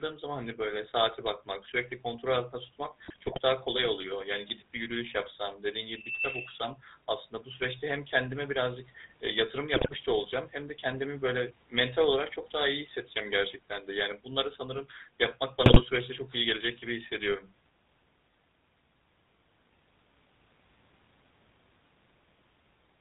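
Throughout, the GSM full-rate codec gives the speech a buzzy, gravelly roughness; a spectrogram shows nothing above 4 kHz, consistent with the 13 kbps full-rate coder.

From 3.04 to 3.4 s, 9.74 to 9.96 s, and 15.66 to 15.81 s, GSM bit errors corrupt the decoder's filter and gain values, producing squawks and pops. These appear as smeared, blotchy spectral bursts and sudden level spikes on the waveform.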